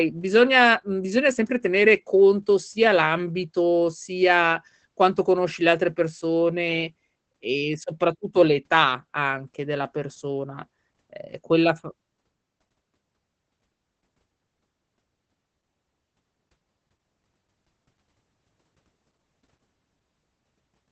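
Throughout the speech, Opus voice compression is running its SILK linear-prediction coder in wideband mode at a low bitrate, which the sound suggests is around 12 kbps in 20 ms frames. Nothing reaches above 8.5 kHz, so sibilants and breath lose their air and the voice sounds muffled. The coarsely coded excitation is plainly audible as a hoarse, slightly robotic texture across the whole clip.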